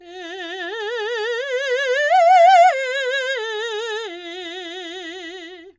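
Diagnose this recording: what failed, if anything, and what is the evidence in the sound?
Nothing in the chain has failed: the music signal holds steady in level, timing and tone, with no audible damage at any stage.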